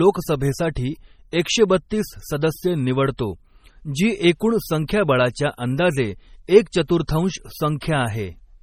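The whole clip sounds watery and swirly, with nothing above 17 kHz. That's likely heavy MP3 compression, and the damage fits a bitrate around 32 kbps. Pre-echo shows up at 4.87 s and 7.81 s, where the codec's noise leaks about 17 ms and 14 ms ahead of sharp attacks, so you hear a brief hiss and then a smeared onset.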